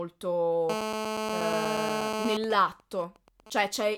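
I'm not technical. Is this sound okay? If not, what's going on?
No. From 0.70 to 2.37 s there is a GSM phone buzz. A 2G mobile phone close by, in the middle of a call, sends radio pulses 217 times a second, and the recording equipment turns them into sound. You hear a hard, raspy buzz almost as loud as the speech.

Then from 2.44 to 3.95 s come GSM signalling bursts. The same phone, still in its call but with its user silent, sends only short groups of pulses. These come through as a quieter pattern of even ticks with a longer buzz twice a second.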